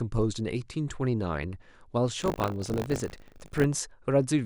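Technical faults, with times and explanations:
2.18–3.66 s, buffer tearing: The speech takes on a steady robotic buzz at 50 Hz. That rate points to a playback buffer cycling every 20 ms. The writing and reading sides have drifted into each other, so they cross within each cycle. A small slice of every buffer, under a tenth, replays sound about 40 ms old. Hard joins on both sides of that slice make the rattle. It follows the speech and drops away in pauses.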